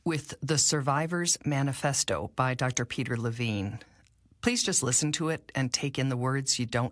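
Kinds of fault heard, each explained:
No audible technical faults are present in the speech.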